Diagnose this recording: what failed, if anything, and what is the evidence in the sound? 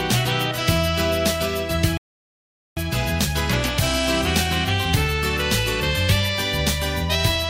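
A rebuffering stall at playback: silence from 1.97 to 2.77 s, then the sound resumes exactly where it stopped, adding about 0.8 s. Unlike a dropout, no audio is lost.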